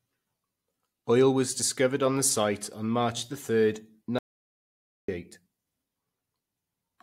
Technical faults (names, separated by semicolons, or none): audio dropout to silence